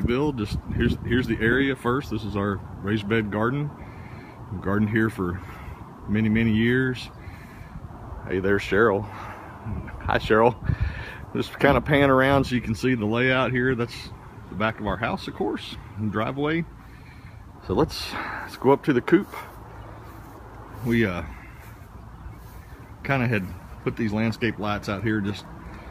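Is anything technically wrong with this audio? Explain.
No, no technical faults heard.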